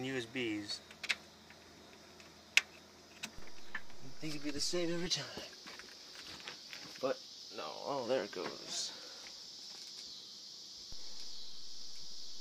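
At 3.38 s there's a DC step: the waveform's zero line suddenly jumps by about -40 dBFS, the way it would if a converter recalibrated or an input carrying an offset got switched in. You hear that jump as a low thump or click while the sound carries on unchanged. The offset is gone by 5.06 s. A second identical step, again about -40 dBFS, hits at 10.92 s and holds right through to the end.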